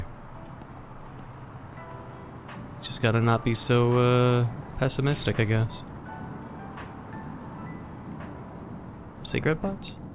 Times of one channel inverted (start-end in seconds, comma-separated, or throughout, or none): none